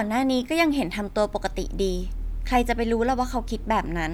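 No technical faults can be heard anywhere in the speech, with the signal staying continuous and steady throughout.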